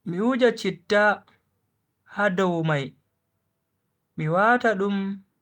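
Listening closely to the speech, nothing stood out as a technical fault at any point.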